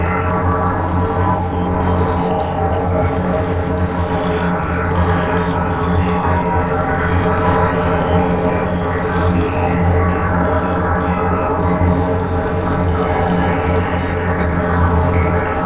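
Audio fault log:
No fault is found in this clip of sounds.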